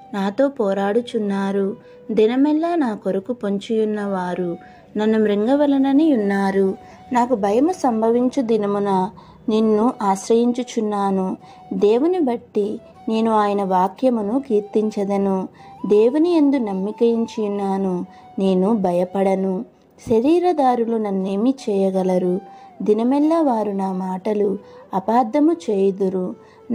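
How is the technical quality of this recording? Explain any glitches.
No glitches or faults heard.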